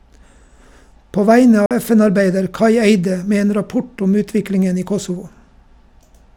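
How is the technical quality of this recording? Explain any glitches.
The recording has one audible fault, a Bluetooth dropout from 1.66 to 1.71 s. About 46 ms of speech drops to silence, then resumes further on. The likely cause is late packets discarded at the headphones; the gap fits two lost packets.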